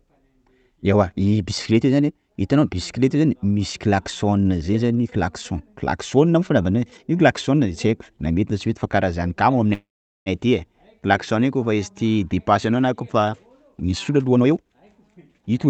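Packets were likely held up in transit at 9.73 s, and the jitter buffer ran dry, producing a call audio freeze that lasts until 10.29 s. With nothing new to play, the receiver stretches the last sound into a brief fading buzz or hiss, and then about 0.42 s of silence follows. When the packets arrive, the audio resumes exactly where it stopped, so nothing is lost, but a gap of roughly half a second has been inserted and the whole call now runs that much later.

From 14.09 s to the end of the clip, the jitter buffer is holding more audio than its target. That backlog is consistent with delayed packets arriving together. To shrink it, the receiver performs a jitter buffer speed-up, repeatedly cutting out short pitch-period-sized slices until about 0.3 s is gone. The speech plays roughly 20% faster at an unchanged pitch and sounds hurried. Throughout, the Opus call path limits the audio to an 8 kHz bandwidth.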